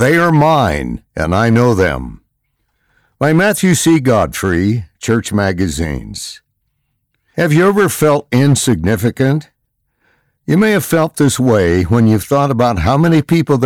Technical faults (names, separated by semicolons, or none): hard clipping